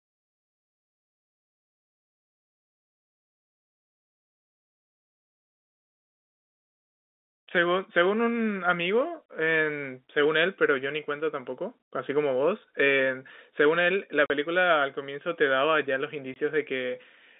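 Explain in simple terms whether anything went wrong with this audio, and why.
Packet loss filled with silence at 14.26 to 14.30 s and 16.34 to 16.36 s: pieces of the stream never arrived, so the player put silence in their place. The speech drops out in short holes, which fit two packets and then one, and has hard edges, heard over ordinary telephone-band sound.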